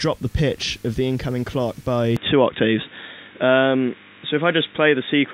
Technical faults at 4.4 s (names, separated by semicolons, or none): input switched to a poorer device